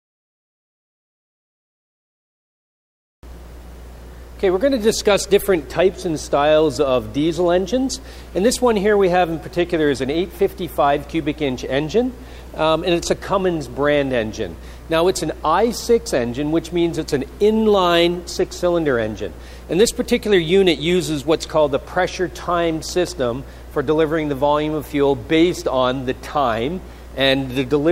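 Nothing stood out as a technical problem on listening.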